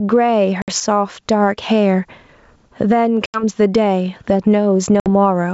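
Speech, carried over a wideband ADPCM call, with two problems. A limiter or compressor is likely clamping down on a microphone gain set far too high. It swings the level by roughly 15 dB. This is gain pumping, and it leaves the speech squashed, with loud and quiet parts pressed close together throughout. There is also packet loss on the ADPCM call at 0.62 to 0.70 s, 3.26 to 3.44 s and 5.00 to 5.07 s, with about 60, 80 and 60 ms of audio missing. That fits three or four lost packets each time. The gaps are filled with abrupt silence, and because the decoder's predictor and step size lose track of the sender's, the speech re-enters slightly distorted before settling within some tens of milliseconds. The G.722 coding itself keeps the band clear up to about 7 kHz, with only a faint upper-band hiss.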